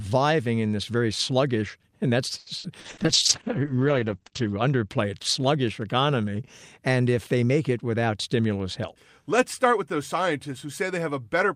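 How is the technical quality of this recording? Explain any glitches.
The recording has three network-related faults between roughly 2.4 and 8.4 seconds.

From 2.39 to 3.00 s, repeated packet loss causes four gaps, the longest 70 ms. Each gap is filled by extending the previous sound, so the speech turns choppy and robotic.

A call bitrate drop from 2.84 to 4.95 s cuts the encoder from 64 to 9 kbps and the bandwidth from 20 kHz to 8 kHz. The speech sounds muffled and watery.

From 8.02 to 8.42 s, a jitter buffer speed-up trims about 50 ms of pitch-period slices to reduce delay. The speech runs at 112% speed at unchanged pitch and sounds hurried.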